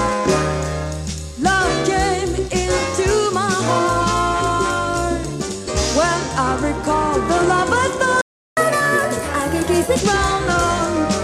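A playback stall cuts the audio to silence from 8.21 to 8.57 s, a gap of about 0.36 s, most likely because the player ran out of buffered data or its playback thread was briefly blocked, so output stopped until it recovered. Catch-up at higher speed follows from 8.57 to 10.0 s: the player resamples its backlog to run 1.25 times faster, raising speed and pitch together by around four semitones to recover the lost time, then drops back to normal rate.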